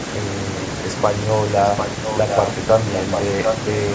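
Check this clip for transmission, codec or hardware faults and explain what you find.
One fault is present: an echo leak. A delayed copy of the speech comes back in four scraps: 1.77 to 1.89 s, 2.05 to 2.48 s, 2.93 to 3.21 s, and 3.44 to 3.56 s. Each trails the original by 752 ms. The first three sit a little below the speech. The last is about as loud as the speech. The likely cause is a loudspeaker at the far end, with an echo canceller that missed part of the pickup and sent it back.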